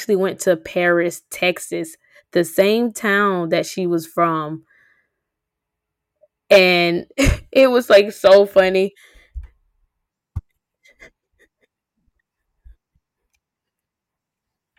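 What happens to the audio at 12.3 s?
Nothing goes wrong at 12.3 s; the audio carries on intact through that moment with no dropout, click or distortion.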